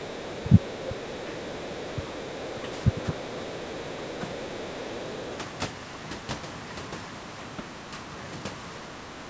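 Other side's voice leaking through runs from 0.04 to 5.57 s: a faint second voice sits roughly 20 dB under the talker, likely loudspeaker echo the canceller failed to remove.

Speech suppressed in double talk occurs at 0.42–0.76, 1.15–1.33, 1.70–2.13, 2.55–3.54, 3.97–4.25 and 8.82–9.30 s. The talker's level dips by roughly 5 to 15 dB, likely because the canceller turned both voices down while they overlapped.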